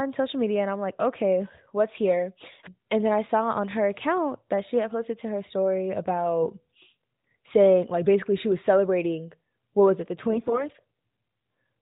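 AMR bit errors at 10.30 to 10.65 s, after "what was it the", make this mobile speech gargly: about one in ten weakly protected bits arrives flipped, misplacing excitation pulses.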